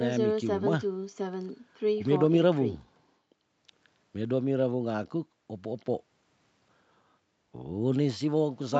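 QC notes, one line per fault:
No faults are heard in this speech. The top end stops at about 8 kHz, which fits the normal band limit of a wideband call codec and the call's microphone processing.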